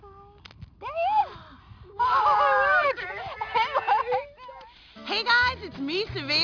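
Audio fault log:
throughout, aliasing. The spectrum runs hard up to a 5.5 kHz edge, which fits a resample from 48 kHz to 11 kHz with no filter first. Energy above that edge folds back as false, unrelated tones, about 20 dB below the signal. High content sounds gritty and metallic.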